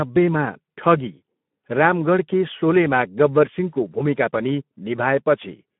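Speech passed through the Speex codec at a low setting for the whole clip, and the sound fits a rate of around 11 kbps. With so few bits for the excitation, the voice comes out noisy and hoarse, and the codec damage is plainly audible throughout. The signal is also held to a narrow line band of roughly 150 Hz to 3.5 kHz, with nothing above 3.8 kHz, so the speech sounds thin and boxed-in, like an older VoIP call.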